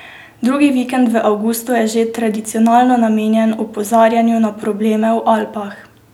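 Nothing goes wrong anywhere in this speech recording, so there are no technical faults to point out.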